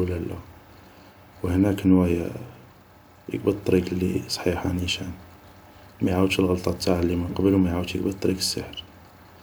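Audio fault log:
No faults heard in this speech recording.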